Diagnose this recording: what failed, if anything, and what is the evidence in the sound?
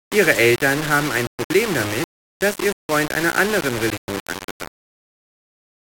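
Grainy, signal-following distortion runs through the whole speech clip, with quiet passages turning gritty and sputtering. This is likely low bit depth without dither at a sample-format conversion, rounding to what sounds like about 4 bits. The error sits only about 10 dB under the signal. Unlike steady hiss, it moves with the sound.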